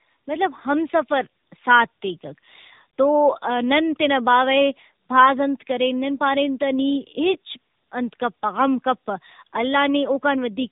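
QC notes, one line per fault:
Throughout, tandem speech coding: the speech was squeezed through two speech coders in a row, most likely AMR-NB twice with a G.711 link between them. Each coder re-analysed the already degraded output of the previous one, so the distortions add up. The result is rougher, more muffled and more warbly than a single narrowband coder would make it, with nothing above about 3.8 kHz.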